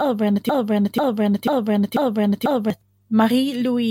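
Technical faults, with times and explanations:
0.49 to 2.70 s, broken-record loop: The speech stops moving forward. A fragment of about 0.49 s repeats exactly, back to back, five times. Each repeat is identical, so the sound stutters in a fixed cycle instead of continuing. The likely cause is a stall in the player, encoder or stream, which kept resending the last piece it held. The speech that should have filled those 2.2 seconds is gone.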